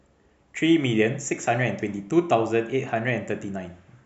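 No technical faults are audible anywhere in the speech recording.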